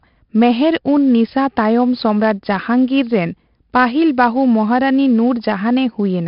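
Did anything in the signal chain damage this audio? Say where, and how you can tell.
Yes, at the codec: heavy 4-bit ADPCM compression throughout. Coarse 4-bit prediction steps leave gritty hiss tracking the speech level, and nothing above 5.3 kHz suggests a sample rate near 11 kHz.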